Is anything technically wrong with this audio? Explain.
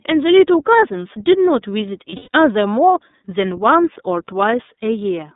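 Yes, there are two faults. The speech sounds thin, boxed-in and slightly rough or synthetic for the whole clip, with nothing above about 3.7 kHz or below about 200 Hz. This is the iLBC codec. It codes each 30 ms frame independently at a low rate, which fits the 13.33 kbps mode, and its narrowband line discards the upper frequencies.

From 2.10 to 2.34 s the speech briefly turns into a held, buzzy, breathy vowel in several short bursts, the longest lasting about a tenth of a second. These are lost iLBC frames. About 180 ms of audio, roughly six frames, went missing across that 240 ms stretch. The decoder filled each gap by repeating the last pitch cycle blended with noise. Because each frame stands alone, clean speech resumes right away.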